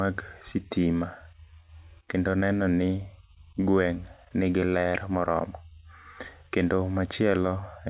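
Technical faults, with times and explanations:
No technical faults can be heard anywhere in this speech recording.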